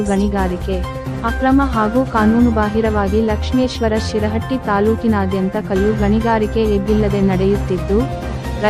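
No technical faults can be heard anywhere in the recording. There are no events in it that need a time or an explanation.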